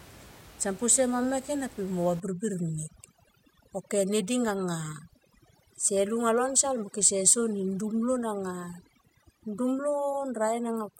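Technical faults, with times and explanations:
2.2 to 11.0 s, overdone noise removal: from 2.2 s the room noise, about 21 dB below the speech, collapses into near silence sprinkled with twinkling specks. Set too aggressively, the reducer cuts any frequency band near its noise estimate, so quiet speech detail is removed along with the noise. On a spectrogram the background floor turns patchy and dark with isolated bright dots, and the fainter speech harmonics break into gaps.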